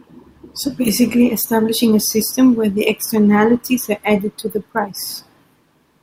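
No technical faults are audible.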